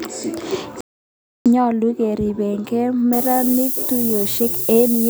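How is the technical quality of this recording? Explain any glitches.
Technical quality takes two clear hits in this speech recording.

From 0.81 to 1.46 s there's a playback stall: the sound just drops out mid-flow for about 0.65 s and then picks back up. That gap most likely means the player ran dry on data or its thread got blocked, so it had nothing to send to the output until it caught up. It's a hard silence, not a fade, which is why it sounds like a hiccup.

From 3.13 s through to the end, it's low bit depth with noise shaping. The signal looks like it's down to about 5 bits, and the rounding error has been pushed up toward the high frequencies instead of spread evenly. You get a steady, thin hiss that gets much stronger up top, and it sits almost as loud as the speech itself.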